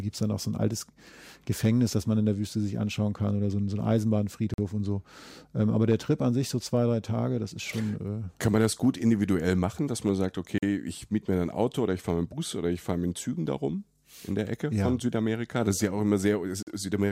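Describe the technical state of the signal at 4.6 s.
A gap between chunks runs from 4.54 to 4.58 s, just before "und so". Silence fills the join between chunks, heard as a 44 ms hole.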